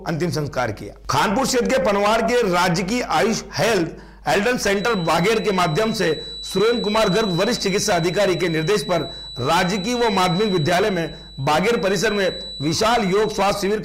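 From 4.70 s to the end, a thin feedback whistle at 4 kHz sits about 15 dB under the main sound, steady in pitch but swelling and fading slowly in level. The likely cause is a loudspeaker-to-microphone loop held just at its gain limit, so one frequency keeps ringing without building. Unlike a runaway howl, it never builds into a howl, and unlike electrical hum, its pitch is high and single rather than a low tone with harmonics.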